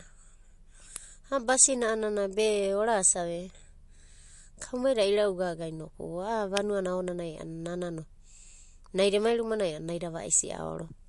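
Throughout, likely MP3 compression at a low rate, around 48 kbps: the encoder starves for bits, removing everything above 11.3 kHz and leaving the speech plainly watery and swirly. At 0.96 s, an electrical switching spike, likely a nearby switch arcing into the line, adds a sharp snap. Another electrical switching spike at 6.57 s, just after "kaumaida ira'ugaga inoku a'a", likely from the same kind of arc, gives a second brief snap over the speech.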